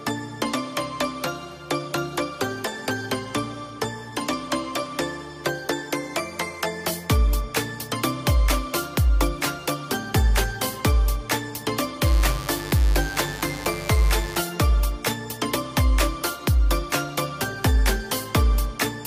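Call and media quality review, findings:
Mains buzz, 12.02 to 14.45 s. Steady raspy buzz, fairly loud, roughly 10 dB under the main sound. 50 Hz mains with harmonics into several kHz. Probable dimmer, rectifier or unshielded cable injecting switching spikes twice per cycle.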